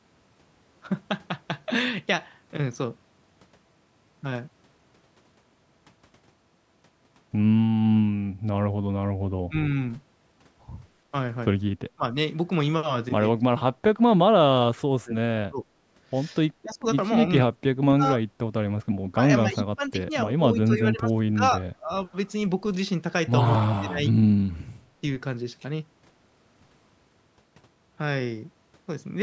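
Speech, passed through call microphone processing that leaves nothing above 8 kHz, shows speech suppressed in double talk at 9.48, 11.95, 13.48–14.01, 15.01–15.66, 16.62, 17.44–18.04, 18.78–21.91 and 23.77 s. The talker dips by roughly 20 to 30 dB or breaks up in pieces, likely because an echo canceller cannot separate the talker from the other side's echo during overlap and turns both down. On the waveform these appear as abrupt notches in the envelope. On the spectrogram they show as vertical gaps or faded bands.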